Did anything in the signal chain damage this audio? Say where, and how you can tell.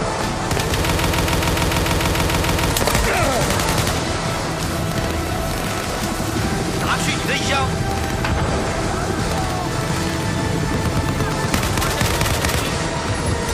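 Yes. From 0.92 s to 2.70 s the audio turns into a broken-record loop: a fragment of about 145 ms plays 12 times back to back, identical each time, and whatever should have filled those 1.8 seconds never arrives. On a waveform the same small shape tiles across the span; a spectrogram shows a vertical pattern repeating at a fixed 145 ms pitch. The likely stage is a stalled player, encoder or stream resending its last buffered piece.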